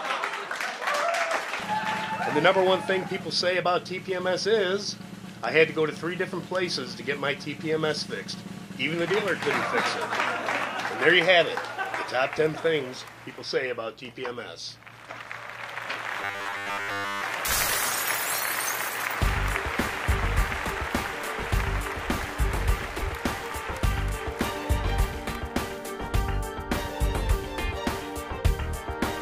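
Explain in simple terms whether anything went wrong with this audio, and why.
From 16.22 to 17.23 s the audio turns into a rigid, metallic buzz at about 100 Hz. This is robotic sound from repeated short buffers, likely caused by new audio arriving too late and the player looping its last 10 ms for most of that second.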